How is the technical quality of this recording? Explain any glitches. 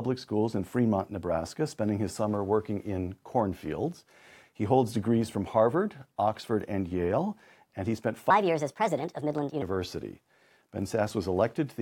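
One glitch stands out, a section at the wrong speed. From 8.30 to 9.62 s the speech runs 1.4 times fast and rises about five semitones, likely from playback on the wrong clock. Tempo and pitch jump together, which separates it from a pitch-shift fault, where timing would stay put.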